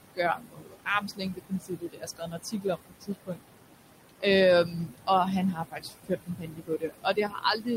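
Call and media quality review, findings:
Noise suppressor artifacts, whole clip: the room noise, sitting only about 9 dB under the speech, is being pulled down by about 20 dB between phrases and lets back in under them. The suppressor works frame by frame.

Speech cut by the noise suppressor, 0.35–3.49 s (about 2 s actually hit), 4.65–5.09 s (a brief fraction of a second), 5.53 s to the end: the suppressor mistakes quiet speech for noise, with drops of about 21, 18 and 21 dB, so endings and soft consonants get swallowed.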